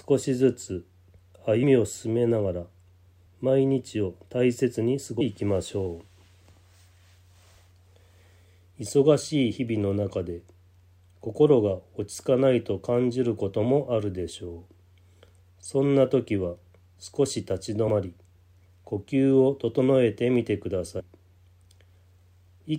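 Brief smeared blips at 1.62, 3.25, 5.2, 12.13, 17.87 and 20.99 s mark sudden forward jumps in the sound, with a short stretch simply missing each time: roughly 70, 100, 400, 70, 50 and 100 ms. These are compressed frames skipped. Whole frames never reached playback, either missing from the file or rejected by the decoder as damaged. The jumps fit 24 ms frames, and overlapping neighbours soften each join into a blur rather than a click.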